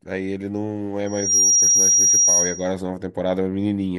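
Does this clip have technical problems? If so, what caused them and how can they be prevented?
Yes. A loudspeaker feedback squeal runs from 1.06 to 2.75 s. It is a steady 5.7 kHz tone that swells over roughly a third of a second. It settles around 10 dB above the speech. The microphone hears its own loudspeaker, and that frequency loops back louder each pass. Keep microphones behind and away from speakers, and lower gain or notch 5.7 kHz.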